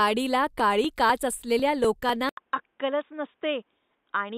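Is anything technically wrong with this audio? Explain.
Yes. This speech has two faults.

From 0.60 to 2.09 s there are periodic USB or driver dropouts. Every 0.25 s, about a millisecond of audio is skipped. This gives roughly seven regular ticks.

At 2.29 s, after an 80 ms silence, the input was likely switched to a poorer device. Nothing above 3.8 kHz remains. The speech turns dull, with new noise about 50 dB down.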